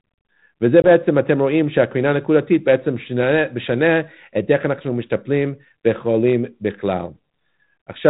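Packet loss on an ADPCM call at 0.82 to 0.87 s cuts about 20 ms to hard-edged silence, which fits a couple of lost packets on this 32 kbit/s G.726 link. The decoder's adaptive predictor and step size drift from the sender's, so speech resumes slightly distorted.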